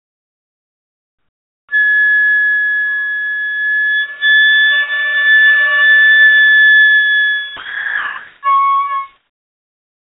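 From the start to 1.69 s the background hiss is flat and featureless, about 27 dB quieter than what follows, with none of the texture of the real ambience. This is comfort noise in place of the background. The sending end's voice detector likely judged the quiet background, some 43 dB below the loudest sound, as silence and stopped transmitting, so the receiver synthesised smooth noise instead. The same happens from 9.17 s to the end at 10.04 s, this time about 13 dB down.

Between 7.57 and 8.43 s the sound cuts out and steady noise takes its place. Roughly 590 ms of real sound is lost before it returns. This is sound dropped by the voice detector. The detector likely mistook this stretch of the recording for background and halted transmission, and the receiver filled the 860 ms gap with comfort noise until the detector triggered again. Across the whole clip, nothing is heard above 4 kHz, which matches the telephone-band G.711 codec on the call path.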